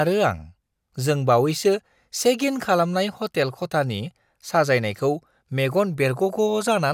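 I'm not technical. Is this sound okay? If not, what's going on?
Yes, it sounds fine.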